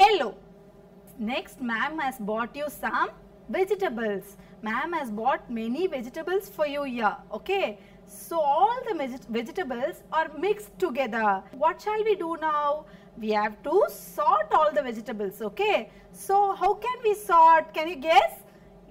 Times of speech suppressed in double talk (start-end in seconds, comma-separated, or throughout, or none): none